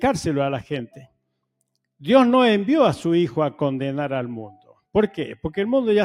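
Sound cut by the noise suppressor appears at 0.89 to 1.17 s and again at 4.49 to 4.95 s. The suppressor misjudged this material as background noise and pulled it down harder than its surroundings, by about 19 dB at the deepest point in the first stretch and about 15 dB in the second. Roughly a sixth and a third of a second are audibly affected, where sustained and decaying parts sag or are clipped short while sharp onsets still get through.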